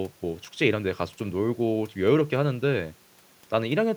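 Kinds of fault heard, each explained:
No kinds of fault are heard in this speech clip.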